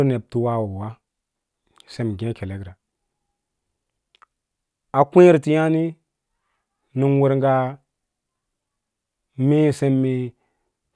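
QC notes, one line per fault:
No faults heard in this speech recording.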